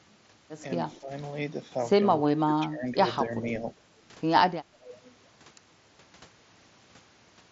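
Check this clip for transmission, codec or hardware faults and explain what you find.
Two faults turn up: a brief echo leak and repeated speech suppression during double talk, heard over a path whose content stops near 7.7 kHz with light graininess, which fits a Bluetooth mSBC headset link.

Echo leak, 0.95 to 0.99 s: the far end's echo canceller likely let part of its loudspeaker pickup through and send it back. A faint copy of the speech, delayed by about 200 ms and about 35 dB below the main level, surfaces briefly.

Speech suppressed in double talk, at 0.98 to 1.1 s, 2.36 to 2.91 s, 3.22 to 3.51 s and 4.61 to 4.9 s: with both sides talking, the echo canceller likely treated this talker as echo and attenuated it. The speech dips by roughly 5 to 15 dB in each stretch, deepest around 2.4 to 2.9 s and 4.6 to 4.9 s.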